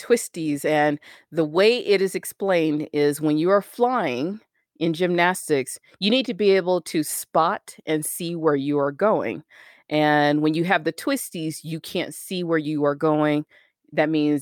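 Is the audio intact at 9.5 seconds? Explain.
Yes, the speech at 9.5 seconds is intact, with no audible fault at that moment.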